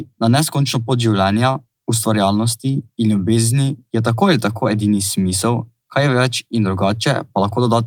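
No technical fault can be heard anywhere in the recording; the signal stays continuous and intact throughout.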